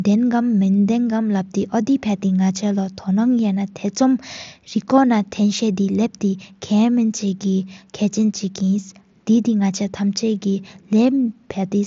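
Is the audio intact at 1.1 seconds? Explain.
Yes, the audio at 1.1 seconds is intact, with no fault at that moment.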